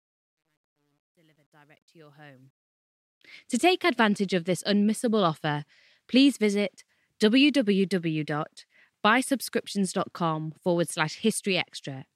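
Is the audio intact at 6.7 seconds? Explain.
Yes, the speech at 6.7 s is intact, with no fault to be heard at that moment.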